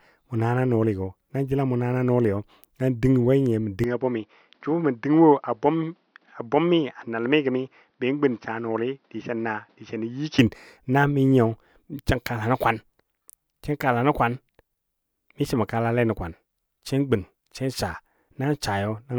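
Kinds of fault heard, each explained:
Input switched to a poorer device: from 3.84 to 10.39 s the speech loses everything above 6.1 kHz, drops a few decibels in level and gains a faint new noise floor, then clears with no gap, likely a change to a narrower-band input device and back.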